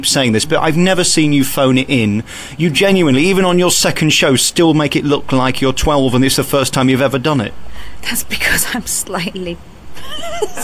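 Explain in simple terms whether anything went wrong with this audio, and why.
Nothing went wrong that could be heard in this recording.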